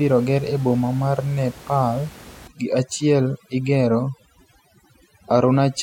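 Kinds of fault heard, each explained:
Overdone noise removal: from 2.47 s onward, noise reduction set too hard strips bands near the noise floor, leaving a lowered background with twinkling specks.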